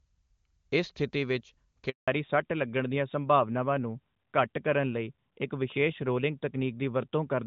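At 1.90 s the sound cuts out for a handover gap of 180 ms. The call was switching networks, and no speech frames arrived. The speech fades within a few tens of milliseconds. Silence holds until 2.08 s, and that stretch of speech is lost.

From 2.08 s to the end, there is a fallback to narrowband. The clear wideband sound before the gap, which fits AMR-WB at 23.85 kbit/s, gives way to a narrowband codec, likely AMR-NB at 12.2 kbit/s. Nothing remains above 4 kHz. The speech turns duller and rougher.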